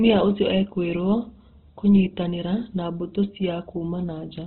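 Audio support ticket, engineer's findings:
Opus compression, throughout: speech band-limited, nothing above 4.2 kHz, heavily grainy and rough. Likely low-rate CELT encoding filling bands with noise, consistent with roughly 12 kbps.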